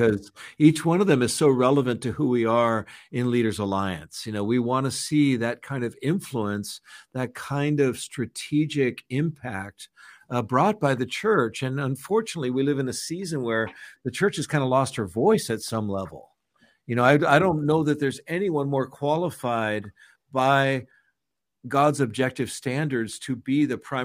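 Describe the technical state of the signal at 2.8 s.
At 2.8 s the signal is intact, with no dropout, distortion, glitch or other fault audible at that point.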